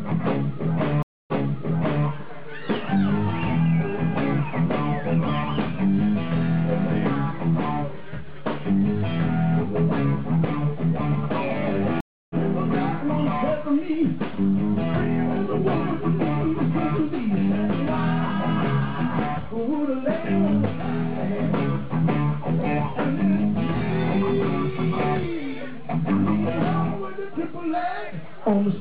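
At 1.03 s a stream reconnect cuts the sound for 252 ms, then resumes 789 ms earlier, replaying a stretch. At 12.01 s a second reconnect leaves 295 ms of silence and jumps roughly 0.3 s ahead. Unlike a plain dropout, the timeline shifts after the gap.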